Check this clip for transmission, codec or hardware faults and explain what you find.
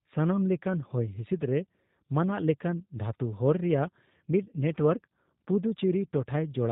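There's one fault, and it runs the whole way through: the speech has gone through the G.729 codec, and the damage is plainly audible. The codec rebuilds each 10 ms stretch from a vocal-tract filter, a pitch predictor and a few pulses, and everything above 4 kHz is gone, and the speech comes out slightly rough and synthetic. The thin, synthetic character points to a narrowband 8 kbit/s VoIP link, likely the lighter G.729A variant.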